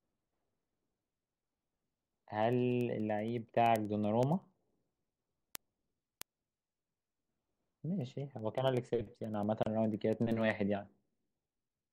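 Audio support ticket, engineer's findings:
Gap at a join of encoded pieces, 9.63 to 9.66 s. Speech cuts to silence for about 32 ms, with smeared edges, then resumes where it stopped. Separately encoded segments joined untrimmed. Encoder start delay and final-frame padding left in.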